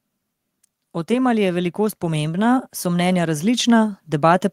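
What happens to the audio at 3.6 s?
At 3.6 s the level is still climbing from automatic gain rising. This began at 1.07 s and continues to the end of the clip. The automatic gain control judged the input too quiet. It is raising its gain step by step, not all at once. The speech and the background noise therefore swell together. Nothing in the source itself gets louder. The whole signal is simply being turned up slowly.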